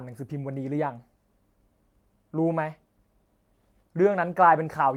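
No technical faults are audible.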